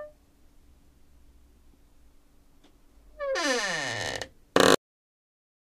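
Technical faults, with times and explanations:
4.75 s to 5.66 s: cut-off end. The sound stops abruptly at 4.75 s, partway through, and falls straight to digital silence for the last 0.9 s with no decay. The final buffers were never written, so the signal is truncated rather than allowed to fade.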